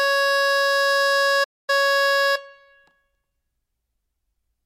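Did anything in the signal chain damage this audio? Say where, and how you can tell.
Yes. Playback stall at 1.43 to 1.70 s: the music cuts to silence for about 245 ms mid-phrase, then resumes. This points to the playback buffer or driver stage, likely a player that ran dry or had its output thread blocked until it recovered.

Skip ahead at 2.35 to 2.37 s: the music jumps forward with no gap, and roughly 0.7 s of material is missing, joined almost directly. This is a network or jitter-buffer fault. Audio was discarded while later packets were already queued, cutting the delay by about as much.

Jitter buffer speed-up from 2.95 to 3.31 s: the music runs at 115% speed with unchanged pitch, so the tempo visibly lurches. The receiver trimmed short pitch-period pieces repeatedly, removing around 70 ms to drain an over-full buffer.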